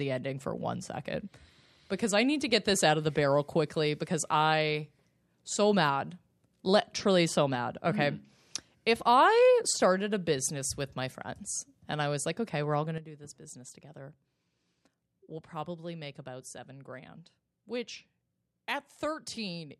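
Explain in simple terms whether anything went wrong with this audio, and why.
At 12.98 s the speech and its background noise both drop abruptly quieter and stay there to the end: a sudden gain jump, likely a volume setting applied instantly without fading.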